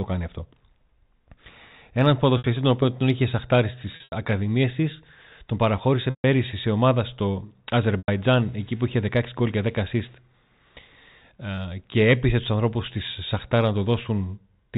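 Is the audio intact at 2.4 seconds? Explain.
No. From 2.38 to 2.44 s the stream suffers packet loss with pitch repetition. About 60 ms of audio went missing, which fits three lost packets, and the receiver filled the hole by looping the last pitch period while fading it out over roughly 50 ms. The gap outlasts that fade, so the speech briefly turns into a held, buzzy tone that sinks toward silence. It then cross-fades back in just before "τον οποίο τον είχε".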